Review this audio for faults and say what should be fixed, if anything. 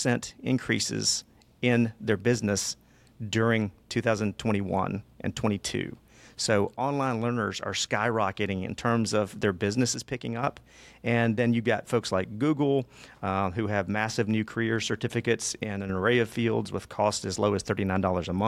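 The speech dips abruptly twice: from 9.94 to 10.43 s, right after "in terms of their", and from 15.64 to 15.89 s, between "massive new career certificates" and "array of fields with". Each time the level falls by about 6 dB, then snaps back. The likely cause is one channel drops out. When the mono sum loses one side, shared content halves in level. Check stereo cabling and connectors, and monitor both channels during capture.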